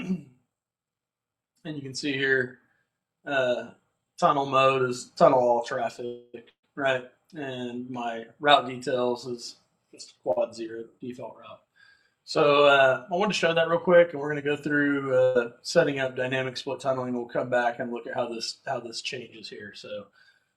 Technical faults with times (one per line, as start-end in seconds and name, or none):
6.05-6.36 call audio freeze
6.50-6.68 burst of packet loss
10.32-10.38 short stall from a late packet
15.23-15.37 burst of packet loss
19.40-20.54 jitter buffer speed-up